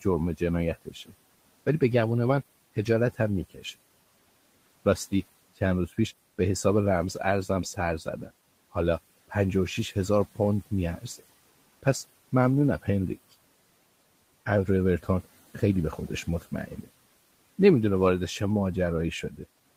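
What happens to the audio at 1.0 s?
Speech cut by the noise suppressor, 0.75 to 1.13 s, before "ولی به گمون من": speech mistaken for noise dips about 16 dB and sounds swallowed, showing as a faded waveform and spectrogram patch.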